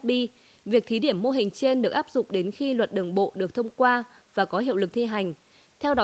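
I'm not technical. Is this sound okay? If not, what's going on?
Yes, nothing here sounds wrong: it's simply speech carried over an ordinary internet call, which naturally trims away the very highest frequencies, so it just sounds like a normal call.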